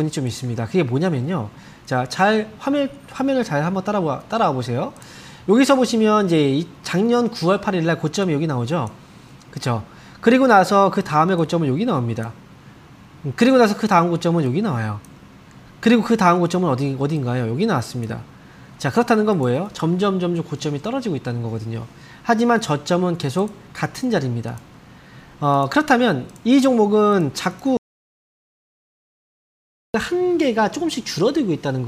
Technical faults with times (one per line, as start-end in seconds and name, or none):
27.77-29.94 audio dropout to silence